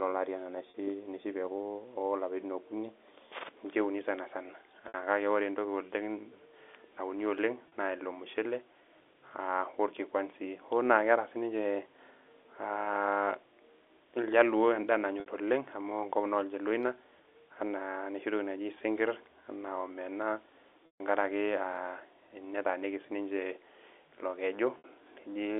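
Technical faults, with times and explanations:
0.70, 4.88, 7.68 (just before "naa ilo"), 15.20 (just after "iljaluo endaa"), 20.86 and 24.78 s, packet loss with pitch repetition: Gaps of 40 to 60 ms, which fit lost 20 ms packets, are bridged by repeating the last pitch period, giving a brief buzzy hold. The 140 ms gap at 20.86 s fades to silence, then cross-fades back.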